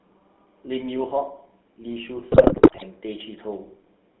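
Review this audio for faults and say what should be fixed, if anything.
Throughout, the speech sounds buzzy and gravelly and is confined to roughly 200 Hz to 3.6 kHz, which points to GSM full-rate codec coding at 13 kbps.

From 2.32 to 2.84 s the speech breaks into squawks, pops and gargling, GSM bit errors where corrupted filter, pitch and gain values distort each frame.

To prevent both, capture the audio over a wideband, error-protected connection rather than a weak GSM link.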